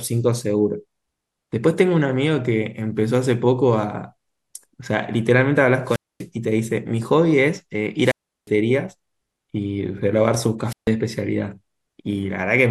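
A short swell of hiss, then near silence before the speech returns: at 5.85–6.27 s (244 ms mute), 8.02–8.51 s (359 ms) and 10.65–10.91 s (146 ms). This is wireless microphone squelch dropout. The FM signal fades, so the receiver's squelch mutes the output.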